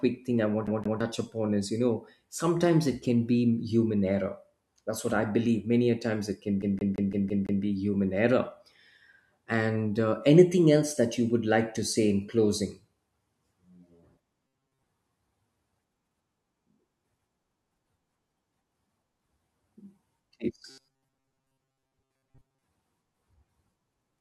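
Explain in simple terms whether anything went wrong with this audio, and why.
CD stuck on one turn, at 0.67 to 1.01 s and again at 6.62 to 7.63 s: the same 0.17 s slice of speech replays with a tiny gap at each jump, twice just before "touch upon is you" and six times between "a times it can" and "human error". It sounds like a scratched disc.

Robotic sound from repeated short buffers, at 14.47 to 14.83 s and 20.70 to 22.63 s: the speech turns into a stiff, metallic buzz at 133 Hz. The likely cause is new audio arriving too slowly, so the player keeps repeating a very short scrap, about 7.5 ms, in place of most of the real sound.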